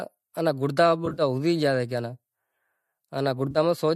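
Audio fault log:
1.06–1.22 s, AAC frame loss with concealment: a brief smeared, noisy and phasey patch, about 80 ms of missing audio scattered over 120 ms, the longest gap around 40 ms. The decoder rebuilds each gap from the last good spectrum, so the sound blurs rather than drops out.
3.51–3.58 s, AAC frame loss with concealment: a shorter smeared patch of about 40 ms, covered in the same way. Both patches sit on the faint graininess of a likely low-delay AAC stream.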